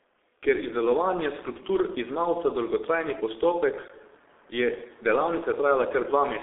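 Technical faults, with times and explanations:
Throughout: G.723.1 codec. The audio is band-limited and nothing is left above about 3.8 kHz. The lowest tones below about 300 Hz are thin too, which fits a telephone line band of roughly 300 Hz to 3.6 kHz. Consonants smear and vowels take on a hoarse, buzzy edge. The coding damage is heavy, consistent with a bitrate near 6.3 kbit/s. At that rate the codec keeps only a coarse model of the voice, refreshed every 30 ms frame, so fine detail is lost.
3.88 s: block of digital silence. The sound drops to silence for 15 ms and then returns. There is no fade on either side. The waveform jumps straight to silence and straight back, and sharp edges like these usually make a click. The gap is this short, so it is heard as a tick or small pop. A block like this most often appears when the output buffer is not filled in time, and the empty samples play as silence.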